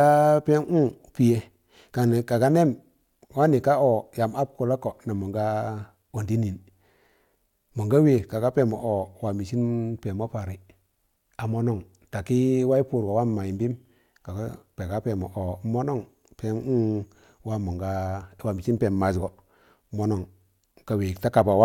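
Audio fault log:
No audible faults detected.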